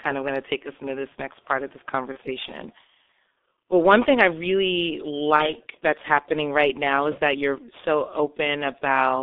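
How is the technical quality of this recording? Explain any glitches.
The recording is heavily degraded throughout by a low-rate telephony codec, and it has two short dropouts repaired by concealment.

The G.723.1 codec damage runs the whole clip. The band is squeezed to roughly 250 Hz to 3.6 kHz, and the slow-updating voice model at what sounds like about 6.3 kbit/s smears consonants into a muffled, hoarse texture. Unlike plain band-limiting, the harshness itself comes from coarse coding.

VoIP packet loss concealed by the speech codec occurs at 2.12–2.18 s, after "next part of this", and at 5.36–5.55 s, between "one thing I really" and "that's happening right now". Each gap fits a single lost 30 ms frame, which the decoder filled by extending its last pitch and filter while fading the gain. That produces a brief, fading buzzy tone or coloured noise rather than silence or a click. The voice stays weak or distorted for tens of milliseconds after each gap because each frame builds on the last.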